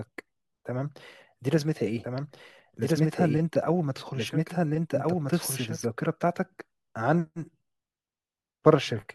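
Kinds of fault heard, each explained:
Doubled audio track: from 2.04 s to 5.86 s a second, full-band copy of the speech runs about one and a half seconds behind the original and at roughly the same level. The likely cause is a second capture through a slower path, or an edit holding two misaligned copies. Unlike an echo or reverb, the copy has no decay, no room colour and no fading repeats. It starts and stops abruptly at those two points.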